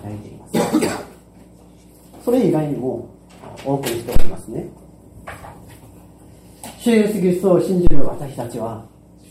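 A deep thump lands at 4.16 s, dying away within about 40 ms, and again at 7.87 s with a longer 66 ms decay, both peaking near about -1 dBFS: a phantom power thump, where switching the supply sends a voltage step through the input's coupling capacitors.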